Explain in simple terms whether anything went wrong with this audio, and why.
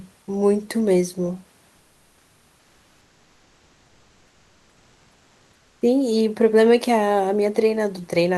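From 1.77 to 5.81 s the room background turns into a smooth, featureless hiss. This is comfort noise in place of the background, likely from the call pausing transmission. Unlike a dropout, the sound never goes silent.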